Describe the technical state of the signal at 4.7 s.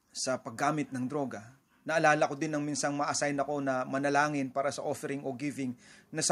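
At 4.7 s the signal is intact, with no dropout, distortion, glitch or other technical fault to be heard.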